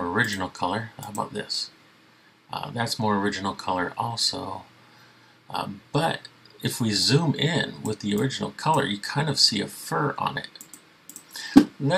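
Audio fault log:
No fault found in this audio.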